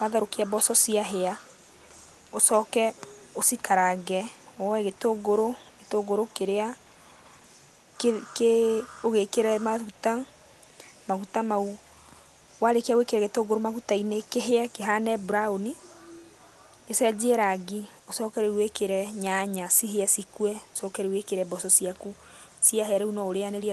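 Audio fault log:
0.56–0.63 s, 1.42–3.39 s, 3.97–7.97 s, 9.26–23.7 s: echo leak. A faint copy of the speech trails about 258 ms behind, a distinct repeat rather than room reverb, likely residual loudspeaker echo. It is about 20 dB down at first, then about 35 to 40 dB down.
13.09–13.2 s: speech suppressed in double talk. The speech dips by roughly 15 dB for about 0.1 s while the far side talks. It is a brief duck rather than a dropout, likely the echo canceller turning both talkers down.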